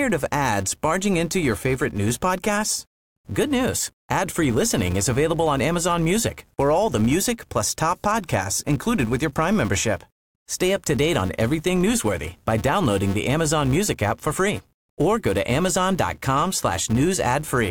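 Throughout the speech, a filter is restarted on every block: it drops its stored state at each block boundary and begins from silence, so a small transient starts every 5 ms block. These form a 200 Hz buzz riding under the speech, louder where the speech is louder.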